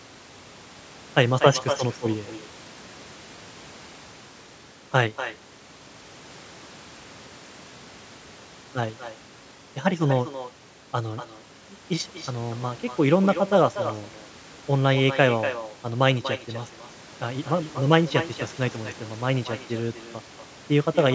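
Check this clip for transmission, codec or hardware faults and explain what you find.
One fault runs through the speech. Echo with no canceller, throughout: the far end's loudspeaker feeds its microphone, returning each phrase roughly a fifth of a second later as a thinner copy about 11 dB down. The call's microphone processing, which leaves nothing above 8 kHz, is working normally.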